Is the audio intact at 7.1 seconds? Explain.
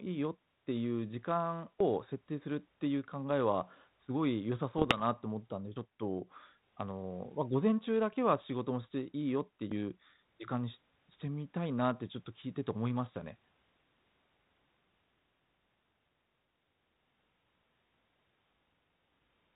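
Yes, at 7.1 seconds the speech is intact, with no fault to be heard at that moment.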